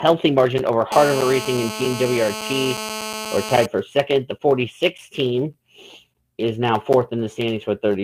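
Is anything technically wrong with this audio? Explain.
Yes. GSM phone buzz runs from 0.92 to 3.66 s. A 2G handset close to the recording chain transmits in pulses about 217 times a second, and some stage of the audio circuitry rectifies that radio energy, turning the burst rhythm into an audible signal. The result is a hard, raspy buzz near 217 Hz, rich in harmonics and unrelated to the program material. Here it holds steady throughout, as during a call, sitting about 10 dB below the signal.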